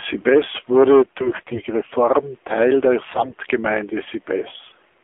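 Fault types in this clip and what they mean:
AMR narrowband mobile codec: The speech has gone through a low-rate narrowband mobile speech coder, whose quality fits a rate of about 7.4 kbps. The coder rebuilds the voice from a vocal-tract model fed by sparse pulses rather than sending the waveform itself. The line band runs from roughly 300 Hz to 3.5 kHz, so the voice sounds thin and boxed-in, with no air on top. The codec damage is plainly audible as a buzzy, synthetic edge on the speech.
AMR bit errors: Over a weak link, the lightly protected bits in the coded frames arrived corrupted, at something like one bit in ten. The frame checks still passed, so the decoder used the damaged data. This put its excitation pulses in the wrong places and skewed the fine pitch, gain and spectral values. In two bursts, from 1.20 to 1.61 s and from 3.08 to 3.35 s, the voice stays at roughly the same pitch and level but turns hoarse, scratchy and gargly.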